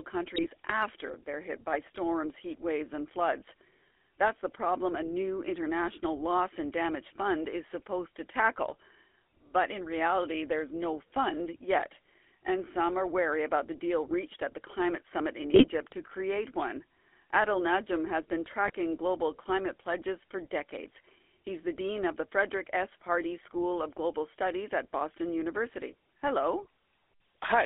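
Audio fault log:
throughout: GSM full-rate codec. Steady buzzy, gravelly roughness sits on every syllable, with the band held to about 300 Hz to 3.5 kHz, which fits a 13 kbps full-rate stream. Pulse-driven vocal-tract modelling causes this uniform grit, unlike the sudden, isolated bursts of bit errors.
0.36 to 0.47 s, 15.54 to 15.66 s, 18.68 to 18.73 s: GSM bit errors. Short squawks and gargling break in just before "after they're hit by", between "the climate summit in" and "to create one", and between "has been" and "global climate pledges for". Corrupted filter, pitch or gain values distort a few frames each. The sound turns garbled rather than falling silent as it would with dropped packets.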